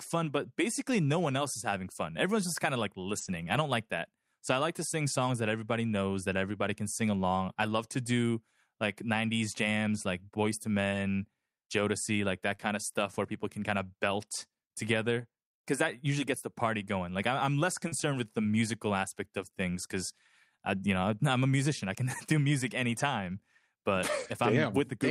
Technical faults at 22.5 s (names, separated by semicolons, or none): none